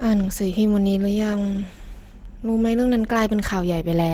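From start to finish, the speech carries a muffled, hoarse quality with a grainy roughness. That's Opus compression damage, plainly audible. The sound points to a low bitrate, around 16 kbps, with the encoder likely in its hybrid speech mode, which builds the low end as speech and fills the highs coarsely. Bandwidth stays wide, with content reaching up to about 20.2 kHz.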